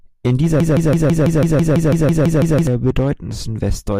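At 0.60 s the speech snags into a broken-record loop: a roughly 165 ms fragment repeats exactly, back to back, thirteen times until 2.67 s. It likely comes from a player or stream stalling and resending its last chunk, so whatever should have played there is gone.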